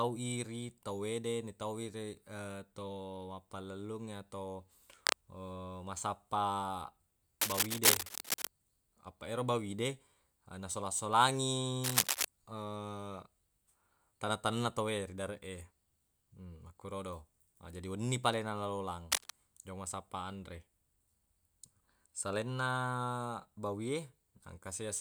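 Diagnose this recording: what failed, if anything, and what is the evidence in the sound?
Cable scratch noise in the analogue wiring: dense, uneven bursts of scratching ride over the speech at 4.93 to 5.17 s, 7.4 to 8.48 s, 11.84 to 12.25 s and 19.12 to 19.30 s, roughly 5 dB above it. Likely a worn cable or connector being moved, with its contact resistance jumping around.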